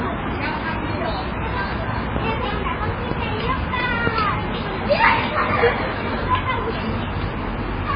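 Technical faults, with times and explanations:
Throughout, MP3 compression: nothing survives above 5 kHz, and the sound is watery and swirly, with smeared attacks. Likely the encoder was starved of bits, consistent with roughly 16 kbps, so it cut the treble and switched weak frequency lines on and off between frames.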